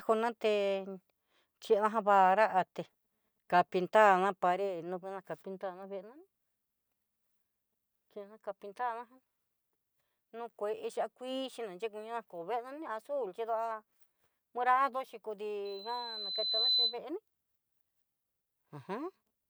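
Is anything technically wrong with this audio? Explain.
Yes. From 15.65 to 16.99 s a thin, piercing 4 kHz tone swells over about a second until it sits roughly 5 dB above the speech. This is loudspeaker feedback squeal: the microphone re-captured its own loudspeaker, and at 4 kHz the loop gain passed one, so that tone kept amplifying itself.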